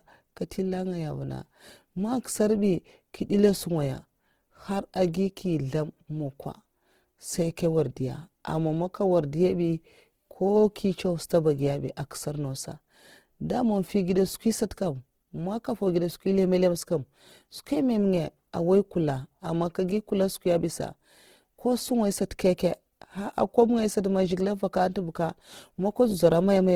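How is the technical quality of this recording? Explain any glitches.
The recording carries plainly audible codec damage from start to finish. Throughout, the speech has a grainy, rough texture, likely from Opus compression in its music (CELT) mode. At a rate that fits about 16 kbps, band energies are held but fine detail is filled with folded or noise content, so tones turn hissy and coarse while the bandwidth stays full, reaching about 20.2 kHz.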